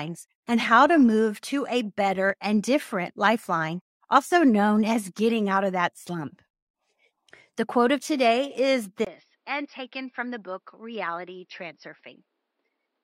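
Input switched to a poorer device at 9.05 s, right after "quote of today is": a 20 ms gap, then speech about 10 dB quieter and dull, with nothing above 5.6 kHz and fresh background noise around 45 dB down, likely from capture moving to a lesser microphone.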